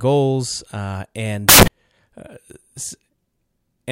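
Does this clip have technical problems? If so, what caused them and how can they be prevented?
Yes. From 1.49 s to 1.68 s the speech turns into loud, harsh broadband noise, a burst of samples built from the wrong bytes. The reader assembled each sample misaligned or byte-swapped, so the rapidly changing low bits landed in the high positions. Prevention: validate byte order and frame alignment before decoding.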